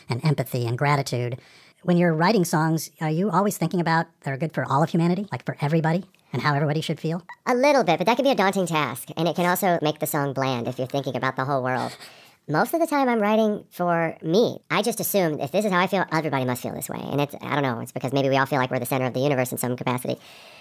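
Speech with a wrong sample rate throughout: everything runs about 1.45 times fast and roughly 6.45 semitones high, which fits 22 kHz audio played back at 32 kHz.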